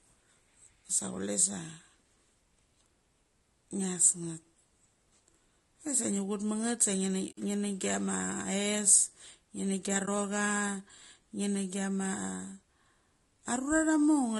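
Low-delay AAC compression runs through the whole clip: the speech sounds rough and grainy, with noise filling the gaps between harmonics and a thin, synthetic-sounding top band. The likely cause is AAC-ELD coding at a bitrate consistent with about 32 kbps, whose short frames resolve pitch harmonics poorly.

AAC frame loss with muting occurs from 7.31 to 7.38 s and again from 10.05 to 10.08 s. Lost frames were decoded as silence, and the overlapping windows fade the sound out and back in, leaving a soft-edged hole at the first and a brief dip at the second. The first gap fits roughly three 20 ms frames, and the second fits a single frame.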